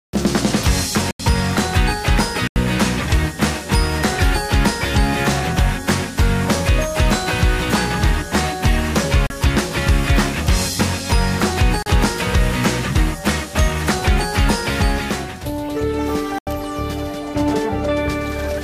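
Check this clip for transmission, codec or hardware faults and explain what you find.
There are five blocks of digital silence, where the audio drops straight to silence and comes back with no fade. The longer three, at 1.11 to 1.20 s, 2.48 to 2.56 s and 16.38 to 16.47 s, each last about 85 ms and sound like short holes; that length fits an unfilled 4096-sample output buffer. The shorter ones, at 9.27 s and 11.83 s, run about 34 and 36 ms and come across more as pops.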